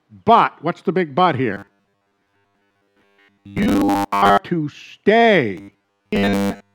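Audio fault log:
1.54–4.38 s and 5.58–6.75 s, robotic sound from repeated short buffers: right after "what's the big but" the speech turns into a stiff metallic buzz locked at 100 Hz. That's likely a 10 ms chunk being replayed over and over, so most of the real audio gets skipped.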